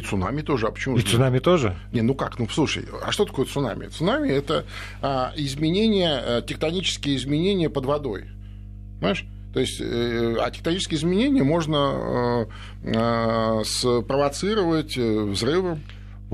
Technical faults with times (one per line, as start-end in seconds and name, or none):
0.00-16.34 mains hum